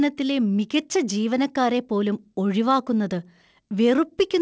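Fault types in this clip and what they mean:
No faults found; the speech arrives through the call path with nothing above 8 kHz, consistent with a wideband codec such as G.722 at 64 kbps.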